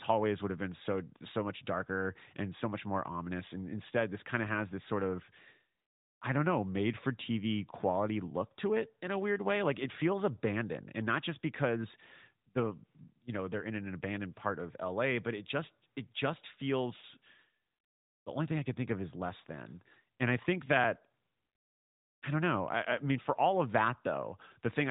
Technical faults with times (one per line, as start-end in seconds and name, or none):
20.84 dropped buffer (overrun)